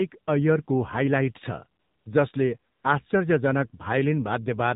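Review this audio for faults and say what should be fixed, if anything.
The call path ran through the AMR narrowband mobile codec at a low bitrate, probably 7.4 kbps, cutting everything above 4 kHz and rendering the speech plainly buzzy and synthetic throughout.

AMR comfort noise appears at 1.80–2.06 s and 2.72–2.84 s: the sender stopped transmitting speech frames, so smooth synthetic noise replaces the real background and can clip quiet endings.

To prevent this, carry the call over a wideband codec at a higher bitrate and turn off discontinuous transmission, or set its voice activity detection less aggressively.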